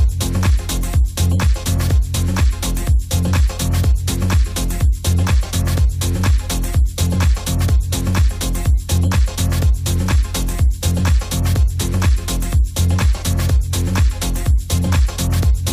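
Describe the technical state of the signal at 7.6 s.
At 7.63 s a compressed frame is skipped: about one frame is missing or was rejected by the decoder, so the audio jumps ahead by roughly 20 ms, which fits a frame of about 23 ms.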